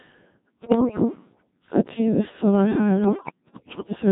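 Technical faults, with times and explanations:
Throughout, Codec 2 vocoder: the speech sounds heavily robotic and buzzy, rebuilt from synthetic sine tones rather than the original waveform. Only pitch, voicing, energy and a rough spectral envelope survive, and the coarseness fits a very low rate near 1.3 kbit/s.
0.60 to 1.05 s and 3.04 to 3.91 s, bit errors on digital voice radio: the synthetic speech lurches in pitch, loudness and tone, collapsing into warbles and bleeping gibberish. Flipped bits corrupt whole frames' parameters, roughly one bit in ten or more, with the later burst lasting longer.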